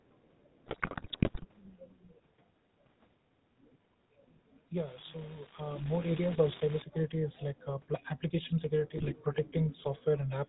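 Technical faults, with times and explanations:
Throughout, GSM full-rate codec: the speech is carried by the original GSM full-rate codec, whose 13 kbps stream fits this clip, and its damage is plainly audible. The codec reduces the voice to a vocal-tract filter excited by a sparse, regularly spaced pulse train that keeps only one excitation sample in three. It passes nothing above 4 kHz, so the top of the band is cut away, and what remains has the buzzy, gravelly roughness of that coarse excitation.
0.66 to 1.45 s, GSM bit errors: about 5.6 percent of the bits in this stretch arrive flipped, corrupting roughly forty consecutive codec frames. When errors land on the filter, pitch or gain parameters, the decoder rebuilds each frame with a bent spectrum or a sudden jump in level, so the speech breaks up into squawks, pops and gargling for most of a second before clean decoding resumes.
8.98 to 9.12 s, GSM bit errors: just after "application security" a shorter burst hits, with about 3.4 percent of the bits corrupted across roughly seven frames. 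The same mechanism applies: damaged spectral, pitch or gain values make those frames decode wrongly, producing a brief squawk and gargle lasting about a seventh of a second, so this disturbance is much shorter than the first.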